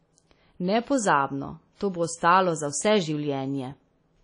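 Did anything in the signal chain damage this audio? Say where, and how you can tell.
Yes, at the codec stage: the speech carries plainly audible WMA compression throughout, with a ringing, washy quality and hiss that swells and fades with the signal. Nothing survives above 10.1 kHz, which fits a low bitrate near 32 kbps. Long transform blocks likely smear quantisation noise around each sound.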